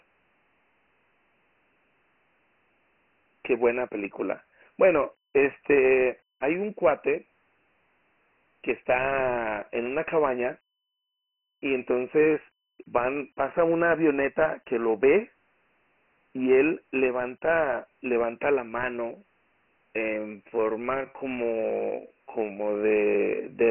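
From start to finish the speech is narrow and gritty, with a rough hiss clinging to every syllable and nothing at all above 3 kHz. This is Dialogic VOX ADPCM, the 4-bit format used for phone menus and voicemail. At 24 kbps it points to 6,000 samples a second, which caps the band at 3 kHz. The damage is heavy: each sample stores only a coarse step from the previous one, and the quantising error becomes that steady grain behind the voice.

At 6.58 to 6.63 s a brief swish of static cuts across the speech, under 50 ms long. This is a wireless microphone noise hit. The analogue FM link from the microphone faded for an instant as reflected radio paths cancelled each other. As the wanted signal weakened, the receiver's own noise surged up before the signal returned.

From 20.15 s to the end the pace suddenly drops to about 0.64 times normal while the pitch stays the same, and the speech drags. 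This time-stretched section was likely produced by software lengthening the audio to fill a slot. It keeps the pitch by repeating short overlapping pieces.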